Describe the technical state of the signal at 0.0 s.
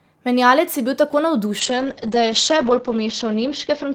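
Nothing is wrong with the signal at 0.0 s; there is no audible dropout, distortion or other fault.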